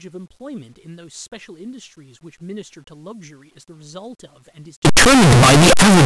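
From 4.85 s to the end, the speech becomes very loud, harsh distortion, with quiet stretches as loud as the rest. The likely cause is signed and unsigned mixed up in the 8-bit samples, flipping the top bit so each zero crossing jumps across the full range.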